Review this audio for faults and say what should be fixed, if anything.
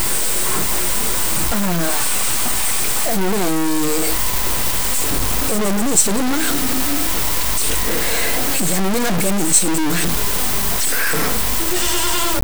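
Low bit depth without dither runs throughout the speech: the grainy distortion, nearly as loud as the speech itself, is likely from truncating to about 3 bits without dither. Keep a higher bit depth, and add dither before any reduction in word length.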